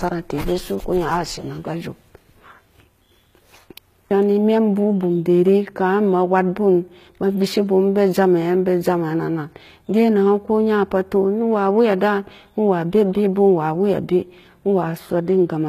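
Throughout the speech, s sounds turn gritty and lispy, the treble stops at 14.9 kHz, and the low-bitrate damage is plainly audible, likely HE-AAC compression at around 20 kbps.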